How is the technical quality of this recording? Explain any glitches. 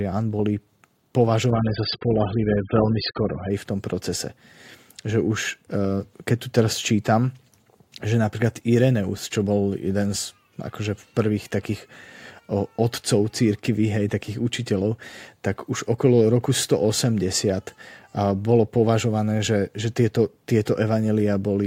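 The quality drops once, briefly. From 1.50 to 3.50 s the adaptive stream fell back to a lower bitrate, the kind of switch a slowing connection forces. Everything above 5.1 kHz vanishes, so the speech turns dull and smeared. The sound suggests a very low-rate AAC version. Full clarity returns abruptly at 3.50 s, with no gap at either edge.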